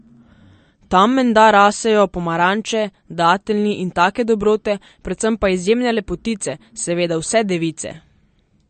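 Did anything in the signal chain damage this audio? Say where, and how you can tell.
Yes, at the codec stage, throughout the speech: everything above 8.6 kHz is missing, and the sound is watery with swirling sibilants. A spectrogram shows a hard ceiling and flickering holes. This is likely MP3 compression, pointing to a bitrate near 40 kbps, starving weak frequency lines.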